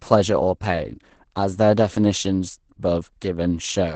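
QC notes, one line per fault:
Throughout, Opus voice compression: the speech sounds SILK-coded in wideband, with nothing above 8.7 kHz, and the coarsely coded excitation leaves it plainly muffled, hoarse and faintly robotic. That fits a low bitrate of around 12 kbps.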